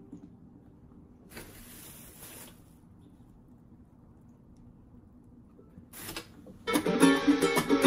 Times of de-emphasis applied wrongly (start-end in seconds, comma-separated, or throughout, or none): none